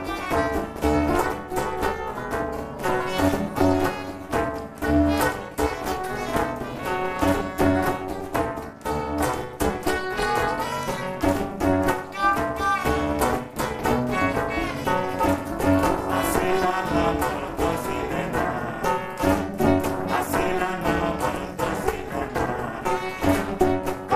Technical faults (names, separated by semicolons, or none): overlap-add ripple